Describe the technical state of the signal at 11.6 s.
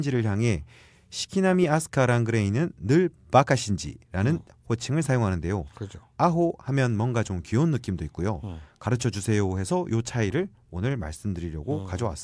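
At 11.6 s the signal is intact, with no audible technical fault in the speech at that point.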